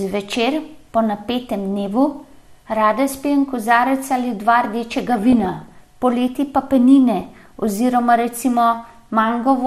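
From the start the speech sounds dull and granular, with upper bands flickering on and off and a plainly audible gurgle beneath what remains. This is MP2 compression, likely at a low bitrate around 80 kbps, where too few bits switch off high sub-bands and coarsely quantise the rest.

DAB burbling appears from 4.91 to 5.88 s and again from 7.20 to 7.67 s. Bit errors get past error correction into the MP2 data and corrupt samples and scale factors, so short blips of noise land in single sub-bands and sub-bands jump in level for up to a frame. The first burst is heavier, fitting an error rate under one percent.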